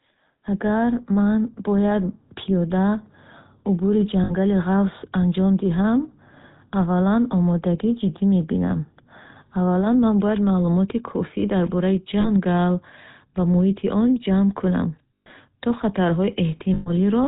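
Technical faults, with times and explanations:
Throughout, GSM full-rate codec: the whole clip has been squeezed through the original GSM phone codec at about 13 kbps, and the damage is plainly audible. The codec rebuilds the voice from a vocal-tract filter fed by a sparse, regularly spaced pulse train, so the speech picks up that familiar buzzy, gravelly edge. Nothing survives above 4 kHz either, so the top end is gone and everything sounds boxed-in and phone-like.
4.24 to 4.33 s, 12.2 to 12.3 s, 15.14 to 15.27 s and 16.74 to 16.91 s, lost GSM frames: four dropouts where the decoder lost frames and covered the gap by repeating the last good frame's settings. Each one comes out as a short, rough metallic ring rather than a clean gap. The first runs about 60 ms and sits just before "ғафсро анҷом диҳам". The second is shorter, about 40 ms, right after "дар бораи". The last two each hold for about 120 ms, with the third straight after "муҳити он ҷамъ кунам". 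Being longer, those last two give the smeared ring the most time to drone before the decoder picks the speech up again.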